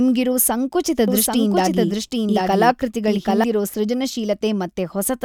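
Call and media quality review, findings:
Doubled audio track, 1.08 to 3.44 s: speech heard twice, second copy trailing by about 0.7 s at roughly equal level, full-band, dry, abrupt onset and cutoff. Likely cause: a slower second capture path mixed in alongside the original.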